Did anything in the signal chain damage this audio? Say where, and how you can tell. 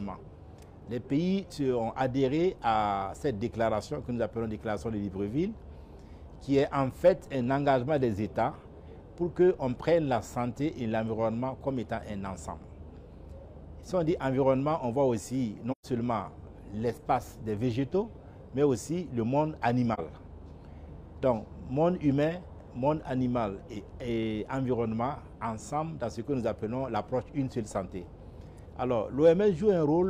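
Yes. AAC frame loss with muting at the codec stage leaves soft-edged dropouts at 15.71–15.86 s and 19.94–20.00 s. The decoder zeroed the missing spectra, so overlapping windows fade out and back in. Gap lengths fit three frames and one frame of about 43 ms.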